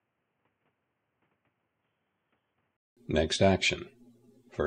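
For the first 2.97 s the audio sounds dull and boxy, with nothing above 3.4 kHz, plus faint added noise sitting well under the signal. Then there's a gap of about 200 ms and it opens back up to full bandwidth at roughly the same level. That's the classic signature of an input switched to a poorer device, most likely a headset's call profile or a cheaper mic handing back to the proper one.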